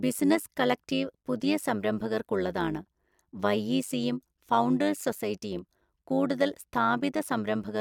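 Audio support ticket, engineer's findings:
Overlap-add ripple, throughout: metallic buzz with extra tones on speech, level swinging about 11 dB around 100 Hz. Frame resynthesis windows overlap without constant-gain sum.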